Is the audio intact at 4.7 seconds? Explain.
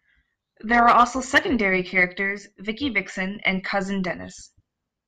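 No. At 4.7 s the speech carries overlap-add ripple, present throughout: frames rejoined with mismatched overlap swell and dip about 6 dB around 200 times a second, a metallic buzz with extra tones around each note. The waveform envelope shows regular scalloping, the spectrogram fine vertical striping.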